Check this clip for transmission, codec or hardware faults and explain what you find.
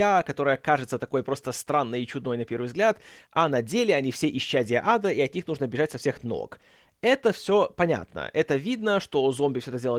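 No transmission, codec or hardware faults.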